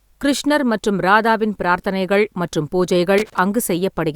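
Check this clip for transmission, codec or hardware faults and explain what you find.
A hardware fault is present: loose connector crackle, from 3.18 to 3.38 s, right after "மற்றும் ராதாவின் பிரார்த்தனைகள் மற்றும்". A worn or dirty contact in the signal path is making and breaking contact rapidly, so the speech is chopped into fragments for about 0.2 s. The result is an irregular burst of scratchy crackle laid over the speech.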